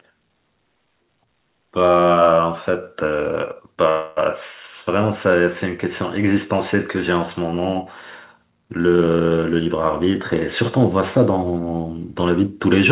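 A call audio freeze runs from 3.90 to 4.19 s in this speech recording: about 265 ms of buzzy, fading continuation of the last sound, likely from delayed packets draining the jitter buffer, with the speech resuming where it stopped. A jitter buffer speed-up follows from 9.00 to 10.79 s, where repeated removal of short pitch-period slices, roughly a third of a second in total, makes the speech run at 114% speed with unchanged pitch. Over the whole clip, nothing is heard above 4 kHz, which fits a narrowband G.711 A-law call path at 64 kbps.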